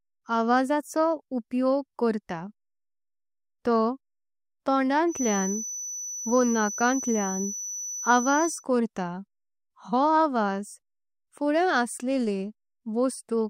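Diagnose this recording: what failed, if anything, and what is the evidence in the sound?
A feedback whistle sits under the speech from about 5.06 s to 8.66 s: a thin, steady tone at 6 kHz, roughly 10 dB below the talker, swelling and fading slowly in level without ever building up. That points to the acoustic and analogue side, most likely a loudspeaker leaking back into the microphone with loop gain hovering right at the edge. One frequency rings on in the loop, but it never runs away into full howl.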